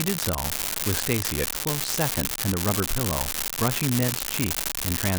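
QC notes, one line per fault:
Throughout, unreliable data bit: a steady crackle and fizz runs under the speech and carries on through the pauses, because one marginal data line flips its bit in a random share of samples, each error adding a same-sized spike of about -6 dBFS.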